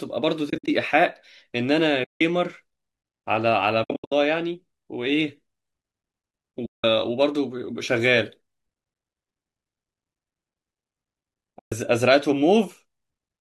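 AAC frame loss with muting occurs at 0.50–0.68, 2.04–2.21, 3.84–4.12, 6.66–6.84 and 11.59–11.72 s. Lost frames were decoded as silence. The speech fades out and back in. The first and third gaps are broken patches, each run under a tenth of a second. The likely codec is low-delay AAC, whose short frames suit the brief fades.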